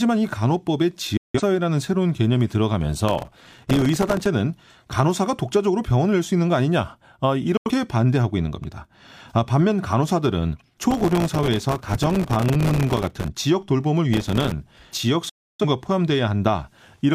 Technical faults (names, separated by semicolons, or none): digital broadcast dropout; processor overload crackle